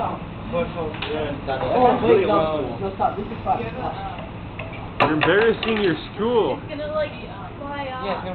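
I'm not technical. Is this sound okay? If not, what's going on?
No. From 3.06 to 3.91 s there is a Bluetooth SBC bit pool drop. The wireless link got crowded, so the sending device cut how much detail it sent. The top end goes dull, and a gritty hiss rises until quality recovers.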